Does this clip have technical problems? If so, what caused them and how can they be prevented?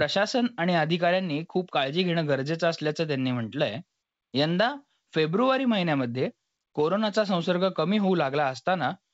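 No, nothing here needs fixing: the speech comes through G.722 wideband telephone coding at 64 kbit/s, where that codec's effect is faint at most, so there's no problem to trace or prevent.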